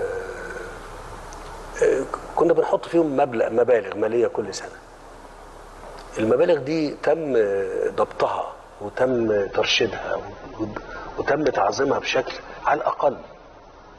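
At 9.08 s the sound switches abruptly to a duller, thinner version that lasts until the end at 13.98 s. This is an adaptive stream at a lower bitrate: the player moved to a cheaper encoding, which fits a step from about 96 to 24 kbit/s AAC. Nothing above 6.3 kHz survives, and codec smearing becomes audible. Unlike a dropout or packet loss, there is no gap or stutter, only a sudden, sustained drop in quality.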